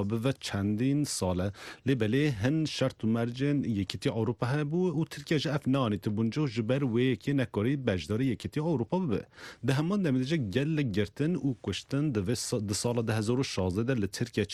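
The audio shows clock drift between sender and receiver. The sender's clock runs slow, by about one and a half percent. The receiver's buffer keeps draining, so it must stretch the stream to avoid running dry. Small timing hiccups result, scattered unevenly across the clip. The repeated timing corrections run from 0.2 s to 14.23 s. The receiver repeats short pieces, always lengthening, never cutting. Playback effectively runs at 99% speed. Roughly a fifth of a second gets added overall.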